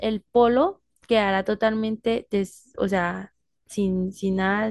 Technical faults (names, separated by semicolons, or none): none